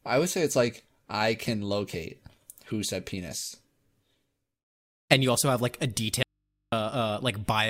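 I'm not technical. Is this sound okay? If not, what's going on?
No. There is an audio dropout to a faint residue from 6.23 to 6.72 seconds, right after "also have like a". For about half a second the speech cuts out abruptly, and all that remains is a low, steady hum, far quieter than the voice. It's not a natural pause or fade. The likely cause is the voice signal being lost briefly while the recording input stayed switched on, so it picked up electrical hum until the sound returned.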